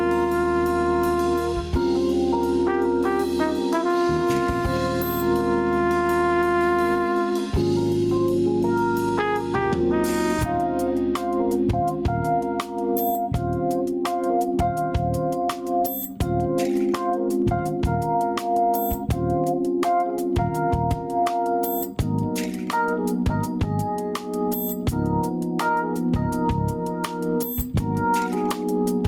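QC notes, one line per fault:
Throughout, gain pumping: the gain swings by around 10 dB, pulling loud and soft parts closer in level, likely a fast limiter fighting gain set far too high.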